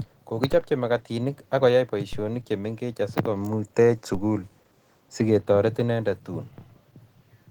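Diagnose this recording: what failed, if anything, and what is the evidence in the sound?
Codec stage: throughout, the speech sounds hoarse and grainy, which points to likely Opus compression in hybrid mode near 16 kbps. A spectrogram shows noise-filled, smeared bands reaching 20.2 kHz.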